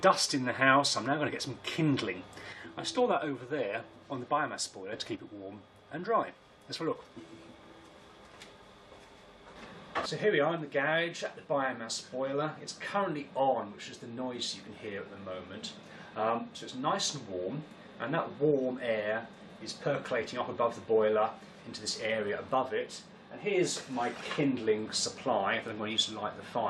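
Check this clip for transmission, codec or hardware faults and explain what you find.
One fault, occurring twice. From 2.53 to 4.93 s, and again from 5.15 s to the end, the level falls abruptly by about 6 dB, most likely a stereo channel dropping out before the mono sum. Unlike a plain gain drop, anything unique to that channel vanishes entirely.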